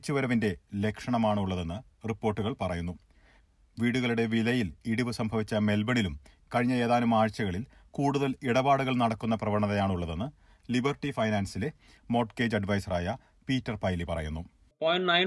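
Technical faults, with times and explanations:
No technical faults detected.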